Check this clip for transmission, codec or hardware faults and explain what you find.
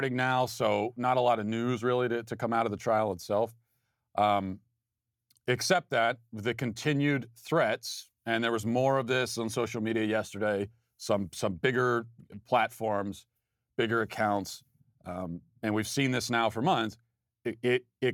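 No transmission, codec or hardware faults are audible in this speech recording.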